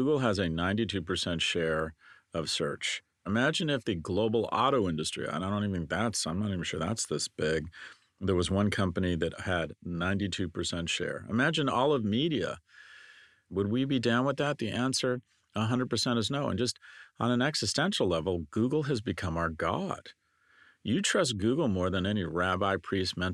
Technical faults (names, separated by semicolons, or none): none